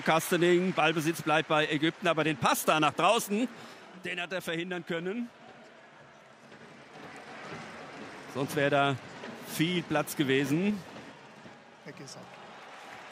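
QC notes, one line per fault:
3.67–4.05 s, zipper noise: the level drops by roughly 10 dB in unsmoothed 3 dB steps, about seven a second, so each jump clicks and a ticking rides on the sound. The waveform shows a staircase envelope, and the spectrogram shows thin vertical broadband lines at each step.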